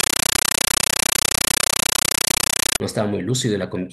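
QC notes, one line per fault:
0.0–2.8 s, compressed stream played as audio: very loud, chattering static replaces the speech, pulsing about 31 times a second in 9.33 ms noise bursts with silence between. An undecoded Dolby Digital (AC-3) stream was treated as samples, which fits a 448 kbps bitstream.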